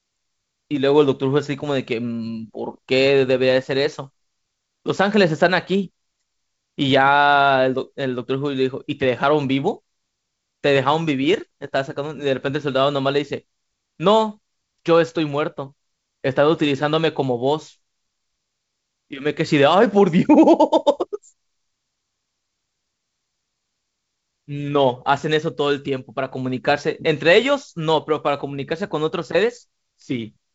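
No faults in this speech; what's heard is G.722 wideband telephone coding at 56 kbit/s, with a light upper-band hiss, slightly noisier lower band and nothing above 7.7 kHz.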